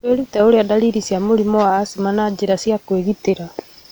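No technical faults occur at any point in this speech recording, so there is nothing to set out in time order.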